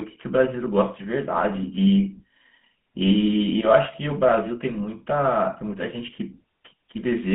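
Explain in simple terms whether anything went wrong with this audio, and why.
GSM full-rate codec damage is plainly audible throughout the clip. This early mobile-phone codec rebuilds speech from a simple model of the mouth driven by sparse pulses, adding a buzzy, gravelly roughness. The line keeps only 150 Hz to 3.6 kHz, so it sounds thin.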